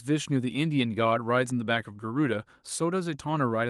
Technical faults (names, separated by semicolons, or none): none